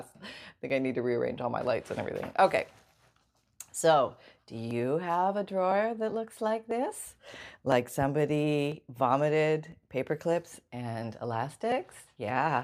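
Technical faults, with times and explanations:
0.70 to 11.72 s, periodic USB or driver dropouts: about ten brief losses spaced 1.00 s apart, each skipping roughly a millisecond of audio with nothing put in its place. Something on the USB bus or in the audio driver stalls the stream at a fixed interval, so the waveform jumps straight across each gap. That sudden discontinuity is heard as a regular tick in the speech, once a second, audible only while there is signal to break.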